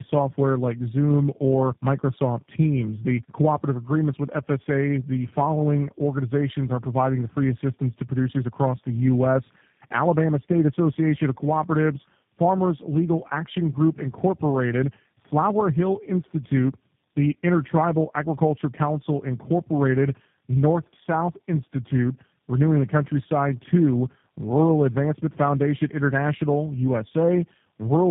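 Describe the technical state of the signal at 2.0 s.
At 2.0 s the signal shows tandem speech coding, present throughout the clip rather than starting there. The speech has passed through several low-rate speech codecs in series, each re-encoding the previous one's degraded output, so coding errors accumulate. The sound points to three such stages, consistent with AMR, GSM full rate and G.729. The result is rough, muffled and warbly speech, with nothing above 3.7 kHz.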